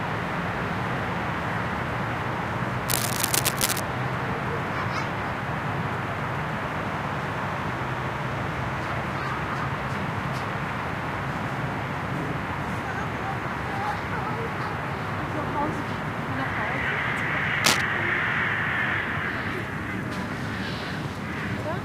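At 2.87 s a stretch of cable scratch noise comes in and runs until about 3.81 s, a rough, uneven rustling that sits at roughly the same level as the sound itself. It's back at 17.64 s for a shorter burst, ending near 17.81 s, and this time it pokes out a bit louder than the sound. The cause is likely a worn cable or connector being moved, its contact resistance jumping around and spraying crackly noise into the signal.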